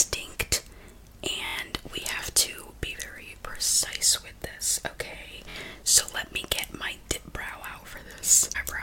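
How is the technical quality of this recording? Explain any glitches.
Two repeated-buffer glitches interrupt the recording, at 1.46 to 1.56 s and 5.50 to 5.55 s. Each time, fresh audio failed to reach the playback device in time, so it replayed the last chunk, about 23 ms long, which fits a 1024-sample buffer. The first event repeats that chunk several times and the second only a couple, each with a hard join, giving a short buzzy stutter. No audio seems to be skipped afterwards.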